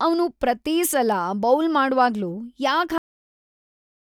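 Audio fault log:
2.98 to 4.19 s, cut-off end: the speech gets chopped off mid-sound at 2.98 s and drops straight into digital silence for the remaining 1.2 s or so, with no tail or decay at all. That's the signature of the final buffers never making it out, whether they never got written to the file or never got played, so the audio just stops wherever the last complete block happened to end rather than fading naturally.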